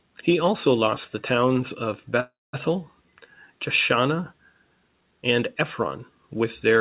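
Call audio freeze at 2.2 to 2.55 s, after "lost the towns of": the last sound fades into about 0.22 s of silence, likely packets stalled, then resumes intact.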